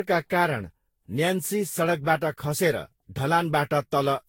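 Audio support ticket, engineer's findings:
Generation loss, throughout. Swirly, hollow, smeared speech; consonant attacks blurred; no content above 16.6 kHz. Likely cause: repeated lossy decode/re-encode, around ten passes, with character fitting Vorbis at roughly 60-odd kbit/s. Each pass requantises on a shifted frame grid, so noise and spectral holes compound beyond single-encode damage.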